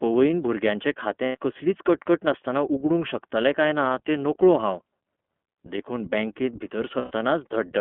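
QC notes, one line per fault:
Throughout: iLBC codec. The speech is band-limited to the narrowband line, about 200 Hz to 3.4 kHz, and sounds plainly rough and synthetic. The 13.33 kbps setting points to 30 ms frames.
1.25–1.37 s and 6.99–7.11 s: lost iLBC frames. The decoder fills the gaps by repeating the last pitch cycle mixed with noise. This gives a brief buzzy, held vowel. The first gap lasts about 90 ms, just before "कसलीच कटकट नासतना". The second lasts about 120 ms, right after "देखून बॅंकेत". The speech recovers almost at once.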